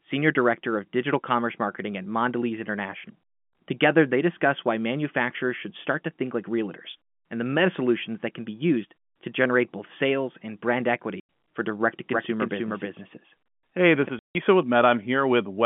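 At 11.2 s and again at 14.19 s, packet loss filled with silence cuts holes of 90 ms and 160 ms, which fits 10 ms packets. Unlike concealed loss, which smears or repeats sound, these gaps drop to dead silence with hard edges.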